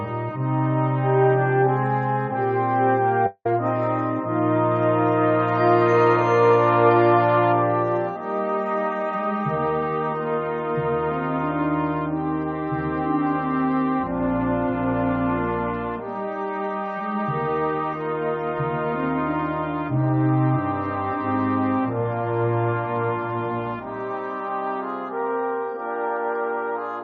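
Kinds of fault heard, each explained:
Long network dropout: At 3.26 s the last sound stretches into a fading buzz, drops to about 60 ms of silence, and resumes at 3.46 s with roughly 190 ms skipped. This is likely a burst of lost packets that the receiver concealed.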